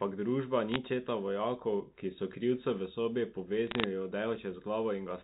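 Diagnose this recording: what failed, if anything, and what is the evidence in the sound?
Bit errors on a digital phone line, at 0.69 to 0.76 s just before "četa vojakov ki so", and at 3.67 to 3.84 s right after "so krivcu v sobi". The fault sits in the transmission stage. Each burst is a cluster of sharp ticks and crackle laid over the speech. A small fraction of a percent of bits were flipped in the G.711 mu-law stream, whose band still stops at 4 kHz. Every flipped high-order bit, or flipped sign of a loud sample, throws one 8-bit logarithmic sample far off its true value, which produces an isolated click.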